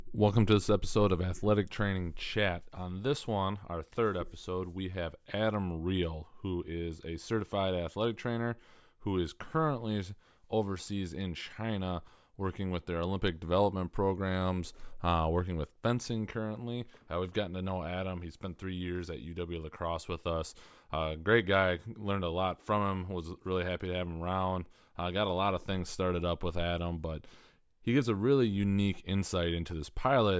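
A speech recording with no technical fault to report. Nothing wrong can be heard at any point in it.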